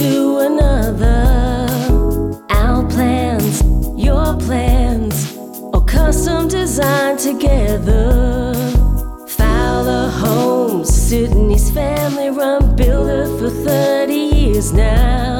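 No technical faults can be heard anywhere in the audio, and the signal holds steady throughout.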